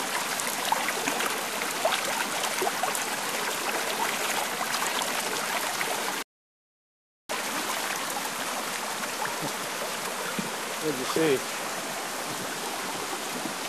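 Sound recording with a rebuffering stall at 6.23 s: playback ran dry and the audio drops to silence until 7.29 s, then picks up exactly where it left off, adding about 1.07 s without losing any content. A waveform shows a flat gap there, and a spectrogram shows a blank vertical band.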